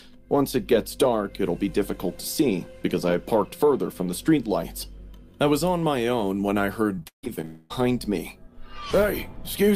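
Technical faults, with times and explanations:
6.95–7.45 s, repeated packet loss (robotic sound): seven gaps in half a second, the longest 158 ms. Each is patched by stretching the previous sound, so about half this span is filled in. The audio turns choppy and robotic, with pieces missing.
7.45–7.72 s, long network dropout: the stream likely stopped arriving here. About 250 ms is filled with a continuation of the last sound rather than silence. That patch buzzes and fades. The audio then resumes without the missing part.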